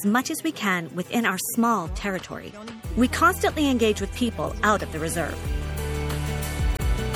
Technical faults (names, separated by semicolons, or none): MP3 compression; damaged data in a compressed stream